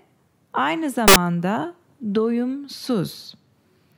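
A short speech clip with one nasty glitch: from 1.08 to 1.16 s it bursts into loud, harsh broadband noise. That's samples built from the wrong bytes, where each value's byte order or alignment slips, so the jittery low bits end up dominating and the signal turns to noise.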